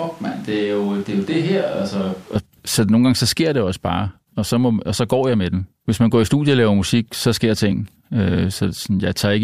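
From the very start until 2.36 s, the speech sounds roomy and hollow, thin in the bass and about 5 dB quieter, with room noise sitting only about 25 dB below it. At 2.36 s, just before "så nogle gange så", it snaps back to a close, full sound. This is likely a switch to a distant microphone: the close microphone's feed was missing, so a farther pickup captured more room and less low end.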